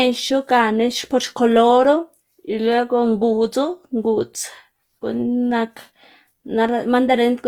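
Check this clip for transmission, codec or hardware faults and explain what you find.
One codec fault runs through the whole clip: Opus compression. From start to finish the speech sounds grainy and rough, with a noisy, gritty texture in place of clean tone. The damage is plainly audible, yet the top end stays open, with content reaching about 20.2 kHz. This is likely Opus in its music (CELT) mode, at a rate that fits roughly 24 kbps. Too few bits reach each band, so band energy is kept but the fine detail is filled with folded or noise-like content.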